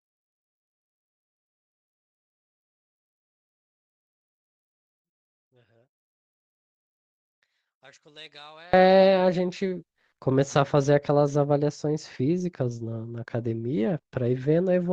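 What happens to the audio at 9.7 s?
Nothing goes wrong at 9.7 s; the speech there plays through cleanly, with no dropout, click, distortion or other audible fault.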